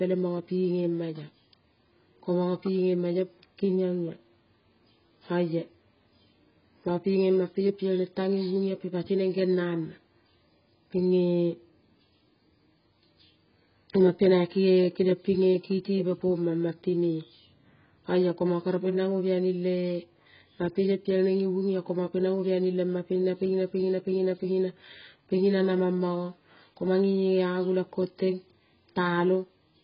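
From start to finish the speech sounds dull and smeared, with a warbling, fizzy texture on sustained vowels and sibilants. The likely cause is heavy AAC compression. At a bitrate that sounds close to 12 kbps, the encoder discards most high-frequency detail and coarsely quantises what remains. On a spectrogram, nothing appears above a hard ceiling at 5.1 kHz. Below that line, the bands show patchy holes and blocky, noise-filled regions instead of clean harmonics.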